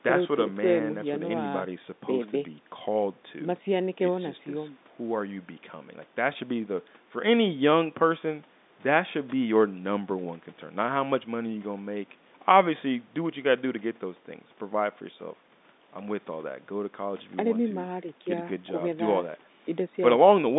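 Nothing is technically wrong with this speech clip, which carries the ordinary narrow band of a G.711 telephone line with nothing heard above about 3.8 kHz.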